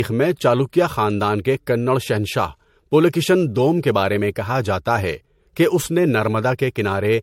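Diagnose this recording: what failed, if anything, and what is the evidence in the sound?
The speech sounds swirly, smeared and hollow throughout, with blurred consonant onsets and nothing above 16.5 kHz. That is more damage than a single pass at around 64 kbit/s MP3 would leave, so this is likely generation loss at the codec stage: a few decode-and-re-encode cycles, each requantising on a shifted frame grid and compounding noise and spectral holes.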